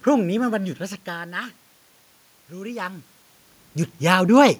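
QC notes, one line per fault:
No system faults heard anywhere in this speech recording.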